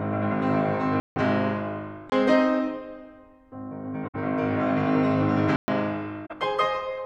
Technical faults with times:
1.00-1.16 block of digital silence
2.10-2.12 block of digital silence
4.07-4.15 corrupt frame concealed
5.56-5.68 block of digital silence
6.25-6.35 corrupt frame concealed

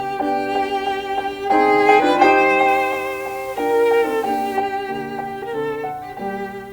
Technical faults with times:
2.68-4.57 low bit depth without dither

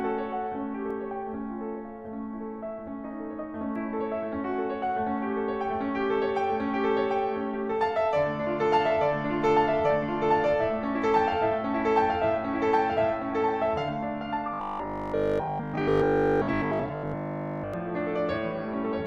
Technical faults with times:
14.54-17.74 robotic sound from repeated short buffers

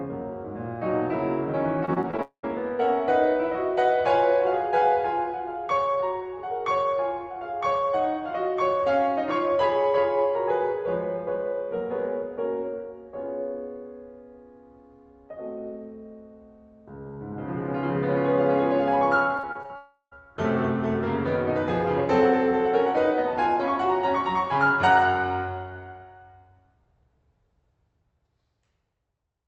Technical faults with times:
1.85-2.20 repeated packet loss (robotic sound)
2.22-2.45 long network dropout
19.37-19.71 repeated packet loss (robotic sound)
19.76-20.15 long network dropout

